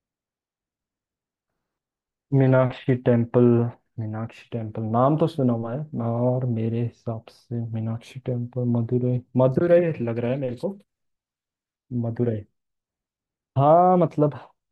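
Nothing stood out on careful listening; no technical fault could be heard at any point in the speech.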